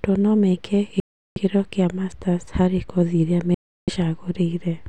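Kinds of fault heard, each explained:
Bluetooth stall: The speech twice drops to dead silence and then resumes, after "no meke" from 1.0 to 1.38 s (about 0.36 s) and after "harĩ kothi irĩa" from 3.55 to 3.90 s (about 0.33 s). This is likely a wireless link holding up packets until the headphones' buffer empties. Unlike a codec dropout or packet-loss glitch, which leaves short clicks or smeared fill, each gap is a clean, complete silence lasting a third of a second or more.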